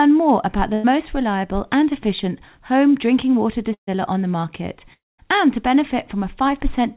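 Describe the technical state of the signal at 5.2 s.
At 5.2 s the audio is at the tail of a gap. Right after "on the market", at 4.93 s, the last sound is stretched into a buzzy hiss that fades, then drops to near-silence until the speech resumes at 5.20 s with "and to". About a quarter-second of audio is simply gone. This is likely a long network dropout: packets stopped arriving, and the receiver filled in by extending and fading the last sound until real audio returned.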